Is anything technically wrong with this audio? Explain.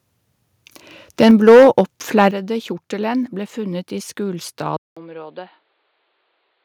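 Yes. The speech has three kinds of fault.

From 1.21 to 1.81 s, and briefly from 2.18 to 2.22 s, there is what is likely microphone overload. The input was driven about 7 dB past full scale in the first stretch, flattening roughly a tenth of the samples, and about 1 dB over in the second, where only a small fraction are hit. The converter cuts the waveform tops off, and the loudest syllables take on a harsh, crackling edge, much stronger in the first burst.

At 1.31 s and again at 2.31 s the microphone volume steps down, likely because the call software's gain control reacted to those clipped peaks. Voice and background fall together in one abrupt step, about 3 dB the first time and about 8 dB the second. Each drop lands right after or inside a distorted passage.

At 4.77 s the input is likely switched to a poorer device. A 200 ms silence marks the changeover, and the sound then runs to the end through the new input. 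It passes a narrower band, so the speech turns dull and boxy. The level sits about 10 dB lower, and a new noise floor roughly 35 dB below the signal appears, with the tone and background of a different microphone path.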